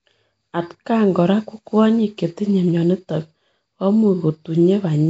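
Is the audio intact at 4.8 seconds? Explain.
No. At 4.8 s, as across the whole clip, the speech carries a rough, hissy halo and a smeared, underwater quality, with nothing above 7.7 kHz, likely from Nellymoser compression at a rate that fits 32 kbps. That codec spends too few bits per 256-sample block, leaving weak bands empty and filled with noise.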